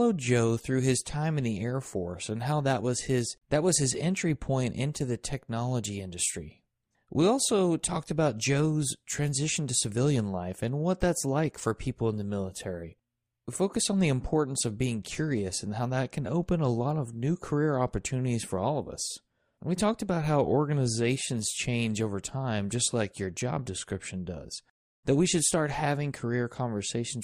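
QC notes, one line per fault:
No technical faults are audible in this speech recording, and the signal holds steady without any break or disturbance in its path.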